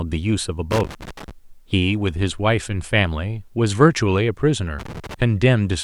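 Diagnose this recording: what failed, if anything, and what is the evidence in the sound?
The analogue wiring failed: loose connector crackle appears twice, from 0.71 to 1.31 s and from 4.79 to 5.22 s. In both bursts the speech is chopped by irregular scratching as a worn or dirty contact makes and breaks, with any DC on the line snapping at each transition. The spacing is ragged rather than periodic, which separates it from buffer underrun clicks, and the breaks are brief and ragged rather than the clean silent gaps of a dropout.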